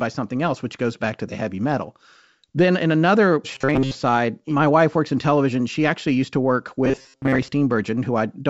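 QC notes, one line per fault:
3.55–3.96 s and 6.85–7.50 s, robotic sound from repeated short buffers: fresh audio likely arrived too slowly, so the player looped a roughly 7.5 ms slice, skipping most of the real speech and forcing a rigid 134 Hz metallic buzz, after "in another" until "my wife works in", and after "actually used to work".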